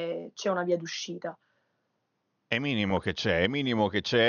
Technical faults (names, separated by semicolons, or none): DAB burbling